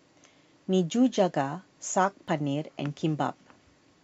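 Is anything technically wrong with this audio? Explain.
Yes. There are two faults.

From 0.12 s to 4.03 s there are clock slip clicks. Faint ticks recur roughly every 40 ms, about a hundred in all, under the speech. The likely cause is two unsynchronised clocks about 500 ppm apart. Each slip drops or repeats one sample.

From 2.28 s to 2.30 s there is an overlap between stream segments. The timestamps of adjacent 2 s segments overlap. The player trims about 21 ms of audio that was never duplicated. The waveform jumps, heard as a brief skip.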